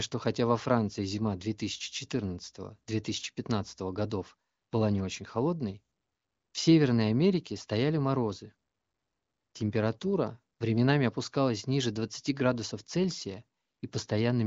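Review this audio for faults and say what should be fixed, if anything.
Nothing here needs fixing: the speech comes across as you'd expect from the AMR wideband (HD Voice) codec running at 18.25 kbit/s, with the top end stopping around 7.5 kHz just as that kind of call audio normally does.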